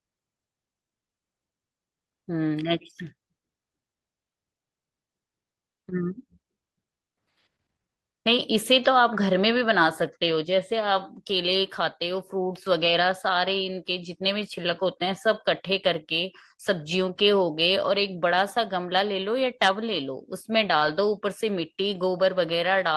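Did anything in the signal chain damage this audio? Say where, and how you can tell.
Yes, at the network stage: short concealed packet loss at 20.77–20.83 s. About 33 ms of a 40 ms hole is filled by stretching the preceding sound, heard as a brief smear rather than a silent gap.

A lost packet rebuilt from error correction follows at 20.81–20.87 s, consistent with two lost packets. Forty milliseconds are replayed from a low-bitrate copy. It sounds rough and noisy, not smeared.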